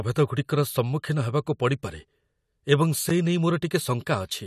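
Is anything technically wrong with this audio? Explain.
Yes. At 3.09 s the speech drops out for about 11 ms in a block of digital silence. A run of samples was replaced by zeros, most plausibly because the output buffer was not filled in time; the length fits a single 512-sample buffer. The signal cuts to silence and back with no fade, so both edges are abrupt discontinuities. At this length the gap is heard as a tick or dip rather than an audible hole.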